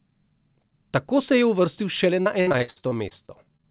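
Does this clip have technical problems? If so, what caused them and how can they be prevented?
Yes. From 2.22 to 3.66 s there is repeated packet loss, which gives a robotic sound. Over a dozen short gaps, the longest 61 ms, are patched by stretching the previous sound. Nearly a third of that stretch is filled in this way, so the sound turns choppy. The call itself is narrowband, with nothing above 4 kHz. Prevent this with a steadier network link and a deeper jitter buffer, and add forward error correction where the codec supports it.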